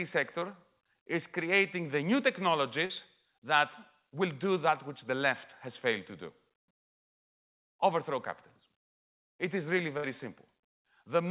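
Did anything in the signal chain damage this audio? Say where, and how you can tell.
Yes, the damage happened in the network stage of a call, where packets were lost and the receiver had to cover the holes. The audio is band-limited at 4 kHz, which points to a narrowband call codec such as G.711 mu-law.

Short concealed packet loss occurs at 0.40 to 0.43 s and again at 2.85 to 2.91 s. In the first, about 20 ms of audio never arrived, and the receiver covered it by extending the preceding sound for roughly 14 ms before crossfading back. In the second, 40 ms went missing and was filled for the full 40 ms. Each heals into a brief smear or wobble rather than a clean dropout.

A burst of packet loss runs from 9.97 to 10.05 s, just after "is really". Here 60 ms of consecutive audio was lost, and the receiver synthesised 60 ms of continuation from the last sound it had, turning it down as the gap went on. 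A voiced sound becomes a held buzz and other sounds a fading hiss, then the speech resumes further on with that stretch missing.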